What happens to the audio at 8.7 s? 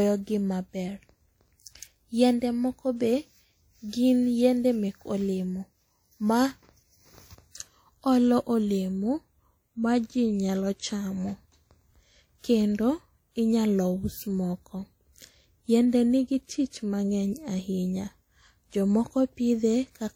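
At 8.7 s, as throughout the clip, the speech sounds washy and ringing with breathing hiss, likely WMA compression near 48 kbps smearing quantisation noise across long blocks.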